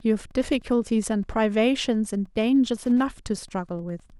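Throughout the speech runs Wi-Fi interference: a nearby radio's beacon, repeating every 102.4 ms, is rectified by the audio circuit, giving a steady tick nearly ten times a second, about 35 dB below the voice. A spectrogram shows evenly spaced thin vertical broadband lines.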